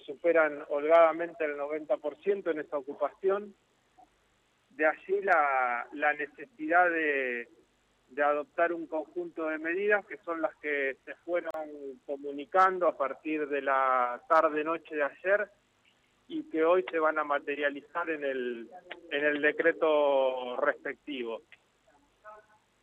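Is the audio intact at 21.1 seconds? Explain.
Yes, the audio is intact at 21.1 seconds, with no dropout, click, distortion or other fault audible at that moment.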